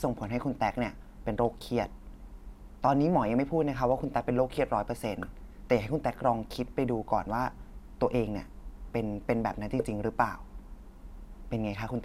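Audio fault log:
Nothing stood out on listening to this speech recording.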